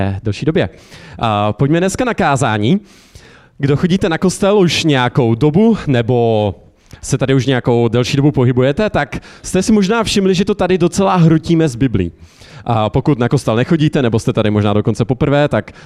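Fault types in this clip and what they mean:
No technical faults can be heard anywhere in the recording; the signal stays continuous and stable throughout.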